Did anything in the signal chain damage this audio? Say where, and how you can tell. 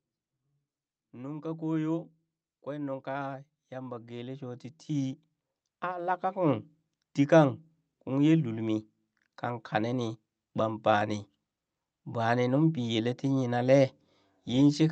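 Yes, in the call processing. Automatic gain rising: the speech and background swell together from 2.67 to 5.26 s, up about 10 dB, then again from 5.81 to 6.68 s, about 3 dB. The AGC heard quiet input and ramped its gain up.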